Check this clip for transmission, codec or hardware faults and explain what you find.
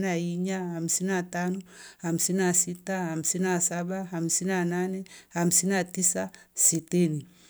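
No transmission, codec or hardware fault can be heard anywhere in the recording. There is nothing here that calls for an explanation.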